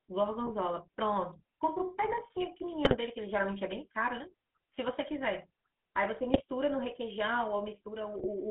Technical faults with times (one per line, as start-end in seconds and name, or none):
0.00-8.50 GSM full-rate codec
0.46-0.51 GSM bit errors
2.85-2.96 GSM bit errors
6.34-6.43 GSM bit errors
8.14-8.26 GSM bit errors